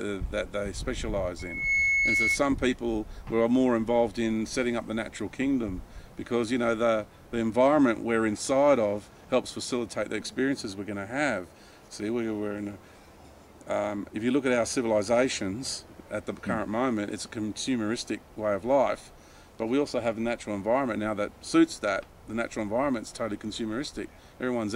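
From 1.39 to 2.40 s a loudspeaker feedback squeal appears: a microphone picks up its own loudspeaker and the loop runs away at 2.2 kHz. The tone swells over about a third of a second to a few dB above the sound, drawing one bright horizontal line on a spectrogram.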